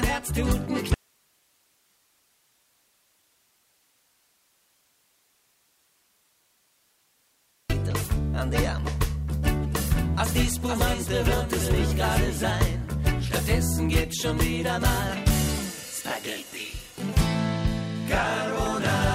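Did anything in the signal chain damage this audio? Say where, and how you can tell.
Yes. An audio dropout to a faint residue runs from 0.94 to 7.70 s, losing about 6.76 s. The sound cuts abruptly to hiss roughly 40 dB down. On a waveform it looks like a flat, thin band. A spectrogram shows a dim, featureless noise floor. The likely cause is a break in the analogue wiring ahead of a still-live input.

A doubled audio track appears from 9.77 to 12.51 s. A full-band copy, about 5 dB quieter, trails by roughly half a second and starts and stops abruptly. A spectrogram shows every pattern repeated, shifted right, with no reverberant smear. This is likely a second, slower capture path mixed in.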